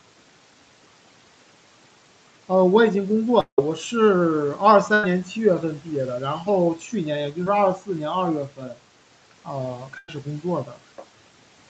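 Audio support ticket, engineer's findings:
Long network dropout, 3.40–3.59 s: audio stops, the last sound is stretched into a fading buzz/hiss for part of the gap, then about 100 ms goes silent before the audio resumes further on. About 180 ms of content is missing. Likely cause is a stall in network delivery, with the receiver's loss concealment filling and then giving up.

Burst of packet loss, 4.94–5.04 s: a held, decaying tail replaces about 90 ms of audio, then playback jumps ahead. Jitter buffer starved. The decoder extrapolates the last frame and attenuates it.

Burst of packet loss, 9.98–10.09 s: same symptom, 100 ms missing, with a 20 ms silent end once the concealment fades out.

Short concealed packet loss, 7.44–7.47 s: brief smear where about 20 ms never reached the decoder. The decoder's concealment continues the preceding sound and crossfades back into the real signal. Audible as a momentary wobble rather than a gap.

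Speech cut by the noise suppressor, 8.49–8.78 s: speech dips by about 11 dB across roughly a tenth of a second and sounds swallowed. The suppressor misread low-level speech as background and gated it down.

Speech cut by the noise suppressor, 10.65–10.79 s: same mechanism, a similar drop of about 11 dB.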